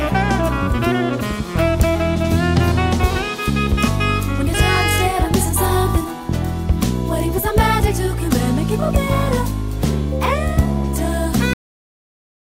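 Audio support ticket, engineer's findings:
Cut-off end at 11.53 s: sound stops mid-event, no decay tail, silence through end of file. Probable component: capture or playback buffer flush. Final buffers never written or played out, so the last stretch of audio was lost before output.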